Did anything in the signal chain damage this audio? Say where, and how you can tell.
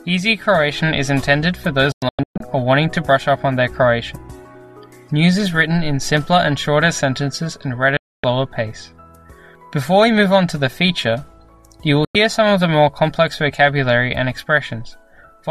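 Yes, digital broadcast dropouts at the reception stage: the sound mutes in clean holes at 1.92 to 2.41 s (scattered gaps, longest 120 ms), 7.97 to 8.24 s, and 12.05 to 12.15 s, each with a 3 ms fade. Unlike packet loss, nothing fills the gaps. The receiver simply silences failed frames.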